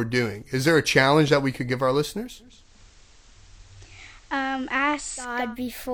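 At 2.39 s digital radio blending to analogue sets in. The receiver loses its digital stream and cross-fades over 431 ms to FM until 5.57 s. A spectrogram shows the speech over a faint hiss floor about 30 dB below it, and the waveform dips about 1 dB.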